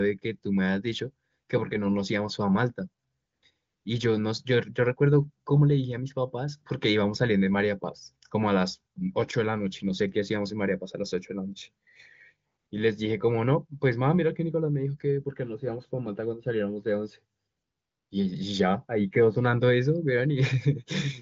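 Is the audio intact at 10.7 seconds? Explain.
Yes, the audio is intact at 10.7 seconds: the speech there comes through the AMR wideband (HD Voice) codec at about 23 kbit/s, with no more than faint coding damage and nothing above about 7 kHz.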